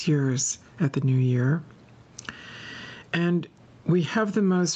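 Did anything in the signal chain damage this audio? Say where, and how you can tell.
Yes. Gain pumping runs throughout: the gain swings by around 15 dB, ducking under loud speech, likely a fast limiter fighting excessive mic gain. Unlike gating, the background never drops to silence.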